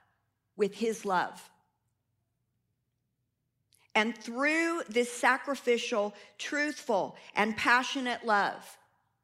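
No technical faults are audible.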